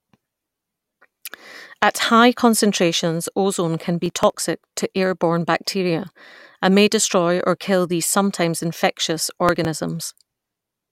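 Processor overload crackle at 4.02–4.33 s and 9.49–9.65 s: roughly 5 ms buffers are skipped, giving gritty tearing, seen as waveform gaps and vertical broadband streaks.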